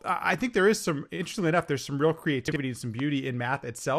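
Throughout the speech, the coding is most likely MPEG Layer II (MP2) compression at a low rate; the dullness and gurgle fit roughly 80 kbps. Starved of bits, upper sub-bands switch off and flicker while the remaining ones are coarsely quantised, leaving a muffled, granular, watery texture.

From 0.34 to 0.36 s a loud pop sits on top of the speech, peaking about 10 dB above it. A sudden voltage step, likely from a switch, plug or static discharge, enters the chain and is shaped into one sharp crack while the speech continues underneath.

Between 2.48 and 2.56 s, chunks out of order scramble the sound: a 40 ms block arrived one chunk late and plays after its successor. Nothing is missing, but the swapped order and three hard joins make a brief jumbled stutter.

From 2.99 to 3.02 s a second loud pop appears, about 5 dB above the speech, again a single sharp transient likely caused by an electrical step.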